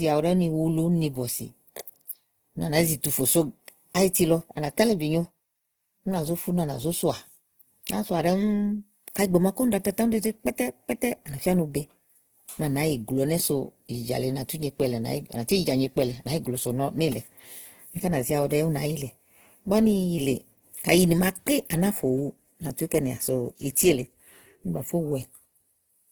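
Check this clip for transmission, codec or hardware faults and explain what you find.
One codec fault is present throughout the speech clip. Opus compression, likely CELT mode near 16 kbps, noise-fills starved bands, so speech sounds grainy and rough despite content reaching 20.2 kHz.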